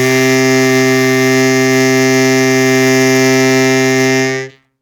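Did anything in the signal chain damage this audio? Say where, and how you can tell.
No, nothing in this music points to signal chain damage.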